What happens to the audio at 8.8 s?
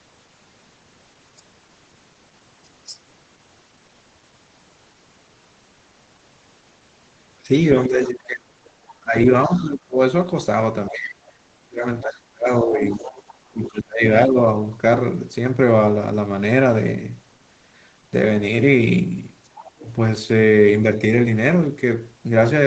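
At 8.8 s the talker's speech is being pushed down in patches. Between 7.88 and 9.99 s it dips and breaks up for about a second and a half in total, falling at worst by roughly 25 dB. This is speech suppressed in double talk. With both ends talking at once, the echo canceller likely couldn't tell the local talker from the loudspeaker echo, so it attenuated everything it picked up, including the wanted speech.

Inside that stretch, from 8.68 to 8.94 s, a faint second voice shows through, roughly 30 dB below the talker. This is the other side's voice leaking through. The far end is playing on the device's loudspeaker and is likely reaching the microphone as residual echo that the canceller failed to fully remove. At that low level it comes across as a brief trace rather than a clear second speaker.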